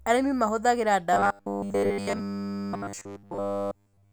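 Speech that, from 1.13 s to 4.12 s, becomes a rigid metallic 100 Hz buzz: robotic sound from repeated short buffers, likely from about 10 ms buffers looping continuously as input stalls.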